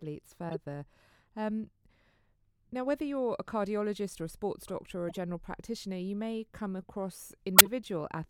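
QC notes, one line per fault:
0.49–0.55 s, 5.09–5.17 s and 7.56–7.67 s, corrupt frame decoded: the decoder played damaged compressed frames, and the misread codes and gains put energy at the wrong frequencies. Each event is a brief burst lasting what sounds like a few frames, peaking around -25, -30 and -10 dBFS.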